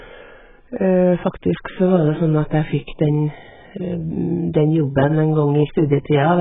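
From start to end the speech stops dead above 3.8 kHz, and sibilants warble and smear rather than sounding cleanly filtered: likely heavy AAC compression.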